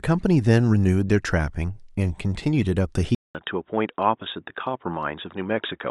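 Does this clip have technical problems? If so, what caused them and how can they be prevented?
Yes. At 3.15 s the speech drops out for 0.2 s, then returns dull, with nothing above 3.8 kHz, about 5 dB quieter and over a new, faint noise floor. This is likely an input switched to a poorer device. The silence and the changed background set it apart from a simple filter. Fix the input device before recording and turn off automatic switching to headset call profiles.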